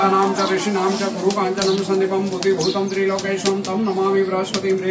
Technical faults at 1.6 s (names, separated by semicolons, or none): aliasing